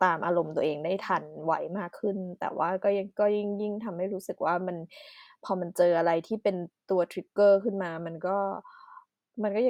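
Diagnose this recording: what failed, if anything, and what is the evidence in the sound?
Nothing in this speech recording points to a failure at any stage of the chain, so there's nothing here to diagnose.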